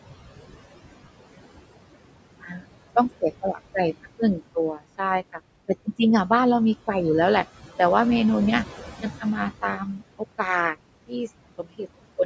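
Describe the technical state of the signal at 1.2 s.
At 1.2 s the background noise pumps, dropping away in the gaps and rising back under the speech. These are noise suppressor artifacts, present throughout: a frame-by-frame suppressor pulls the steady room noise down by about 20 dB in the frequency bands where it judges noise dominates.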